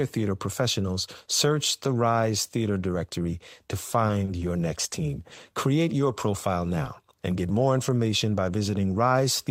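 At 4.07 to 4.11 s there is a short concealed packet loss. About 20 ms of the call never arrived. The receiver filled the gap by extending the preceding sound, then blended back. It is heard as a brief smear, and a little speech is lost.

At 4.25 to 4.39 s comes a short stall from a late packet. The buffer ran dry, and the last sound was held about 20 ms until the packet came. Nothing is missing, but the sound drags slightly. The same stall recurs at 5.35 to 5.39 s, just after "next team".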